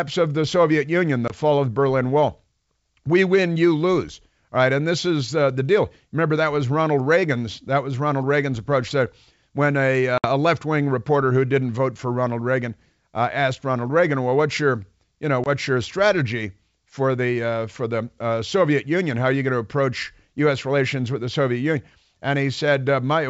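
Packet loss on an ADPCM call drops short runs of packets: 20 ms at 1.28 s, 60 ms at 10.18 s after "when a", and 20 ms at 15.44 s before "your strategy for the". Each loss leaves a hard-edged silent hole in this speech. The decoder's predictor and step size fall out of step, so the sound returns slightly distorted before settling, while the underlying G.722 wideband coding stays clear.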